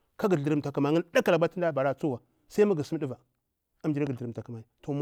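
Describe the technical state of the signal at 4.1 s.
A single sharp loud pop sits on top of the speech from 4.07 to 4.09 s, peaking around 5 dB above the surrounding level, while the speech carries on underneath without a break. The likely cause is a brief electrical pulse entering the chain, such as a connector being disturbed, a switch, a static discharge or a driver glitch. The circuitry downstream shaped that pulse into the short, hard transient heard here.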